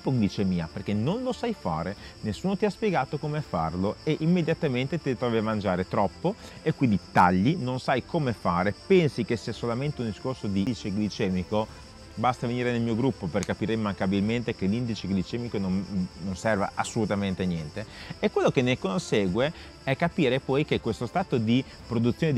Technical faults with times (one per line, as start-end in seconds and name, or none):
10.66 CD skip